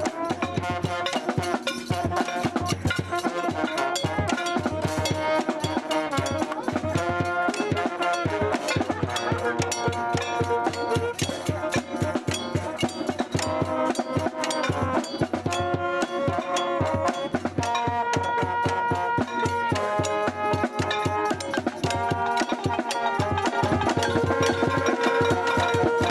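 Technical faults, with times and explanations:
23.53 s to the end: doubled audio track. A second full-band copy of the sound cuts in abruptly, trailing roughly 0.4 s behind at about equal loudness. Unlike an echo, it has no decay or room colour, likely from a slower second capture path.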